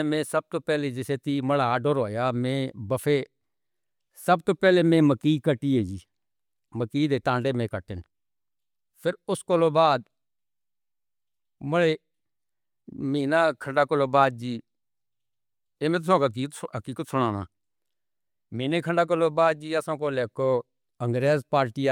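No technical faults can be heard anywhere in this speech recording. Nothing in it points to a problem with how the sound was captured, carried or played back.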